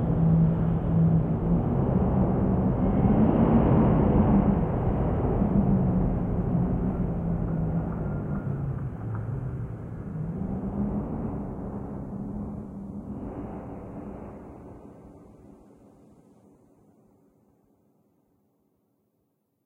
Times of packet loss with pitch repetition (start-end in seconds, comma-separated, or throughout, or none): none